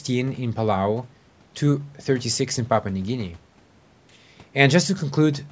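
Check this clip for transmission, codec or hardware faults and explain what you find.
No transmission, codec or hardware faults detected.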